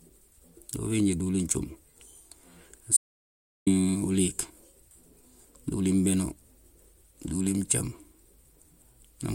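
At 2.97 s the speech cuts off abruptly and the track falls into dead silence, with no room tone or background underneath, until the sound resumes mid-flow at 3.67 s. About 0.7 s of speech is simply missing. This is an audio dropout to silence. The input signal was likely lost for that stretch, through a failed link, a disconnected device or a momentary mute, while the recording carried on writing silence in its place.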